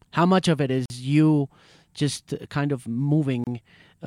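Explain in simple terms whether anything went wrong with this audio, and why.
Two brief holes open up in the speech, one at 0.86 s lasting about 44 ms and another at 3.44 s lasting about 29 ms. Each is a gap at a join of encoded pieces: the audio was compressed in separate chunks and then stuck together without trimming the bit of silence the encoder leaves at each chunk's edges. You hear a sudden, slightly softened dropout, then the sound picks up right where it left off.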